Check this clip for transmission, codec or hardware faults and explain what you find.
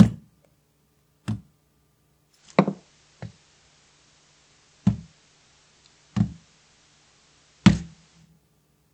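One fault is present. From 2.26 s to 8.32 s, faint hiss appears: the receiver lost digital reception, digital radio blending to analogue FM.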